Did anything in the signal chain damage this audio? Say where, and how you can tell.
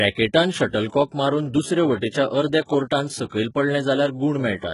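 Yes, at the codec stage, for the whole clip. The speech has bright treble that doesn't belong to it: sibilants sound gritty and metallic, the top end stops dead at about 11.1 kHz, and the damage is heavy. That points to HE-AAC compression as the likely cause, at a rate that fits roughly 12 kbps. Only the lower band is truly coded; the treble is copied up from below by spectral band replication, so its harmonics don't match. A plain low-pass or narrowband codec would sound dull instead.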